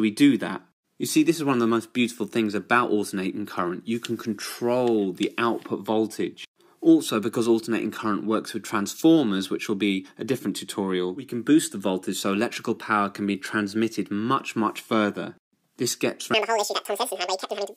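From 16.34 s to the end at 17.77 s, the last section plays at the wrong speed: it runs at 2.0 times the original rate, so the material is compressed in time and the pitch jumps by roughly ten semitones in the same instant. The sound turns abruptly high and hurried, with both tempo and pitch shifted together. The likely cause is an editor or player that applied the wrong clock or rate to this final segment.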